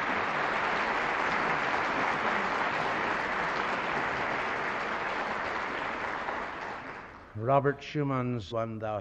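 Damaged data in a compressed stream at 8.5 to 8.52 s: corrupted bytes make the decoder misread frames and lose sync, giving a brief chirp, squawk, click or short hole.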